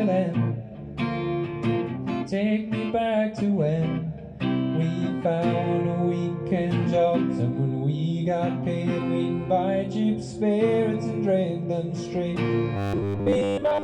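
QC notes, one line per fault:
12.77 to 13.84 s, robotic sound from repeated short buffers: the tail turns into a stiff, metallic buzz at 100 Hz, most likely because audio arrived too late and a 10 ms slice was looped over and over, replacing most of the real sound.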